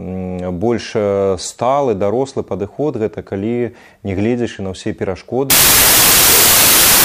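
From 5.50 s to the end at 7.05 s, the audio collapses into a wrong sample width fault. Data packed as 24-bit integers are being read as 16-bit, so many values are built from mismatched bytes. The result is loud, harsh noise with the original sound buried underneath. It also plays at about two-thirds speed, with pitch lowered to match. That slowdown sets it apart from a byte-order error, which garbles the signal without changing speed or pitch.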